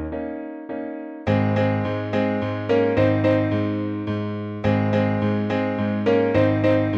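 Hard clipping occurs at 2.72 to 3.35 s, 4.67 to 4.98 s and 6.09 to 6.75 s. Peaks exceed the stage's limit by about 3, 1 and 3 dB and are flattened, adding crackle.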